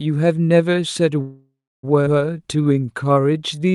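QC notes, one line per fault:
1.21–1.85 s, call audio freeze: The sound stops moving forward and the last moment carries on as a fading buzz or hiss, settling into about 0.3 s of silence before the audio resumes exactly where it left off. The pause totals about 0.62 s and nothing is lost, only delayed. This is likely a stall in packet delivery that drained the jitter buffer, so the receiver stretched the final sound until fresh packets arrived.
2.05–2.08 s, skip ahead: Playback lurches forward, with the material on either side joined almost seamlessly by only a brief 12 ms bridge. Roughly 0.4 s of audio vanishes at this point. A stretch of audio was dropped, either on the way or by the jitter buffer when it overflowed, while later audio was already waiting.
2.37–3.73 s, jitter buffer slow-down: The audio plays slower while the pitch stays the same. Sounds are drawn out, and the pacing feels sluggish, at about 86% of normal speed. 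Across this span about 0.2 s of extra material is inserted. The buffer was running low or had just raised its target delay, so the receiver built up its reserve by repeating single pitch periods and fragments of pauses many times in a row.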